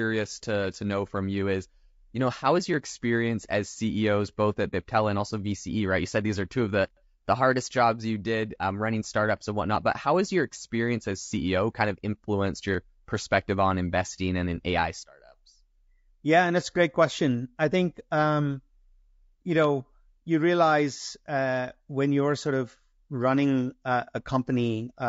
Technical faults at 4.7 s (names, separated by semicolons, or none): low-delay AAC compression; AAC frame loss with muting